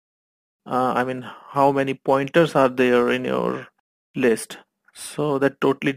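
From start to finish the audio carries a crude rate conversion, most likely from 48 kHz to 44.1 kHz by simply dropping or repeating the nearest samples. The sampling error forms inharmonic tones, a gritty fizz roughly 30 dB down that rises with loud, bright passages, unlike steady hiss.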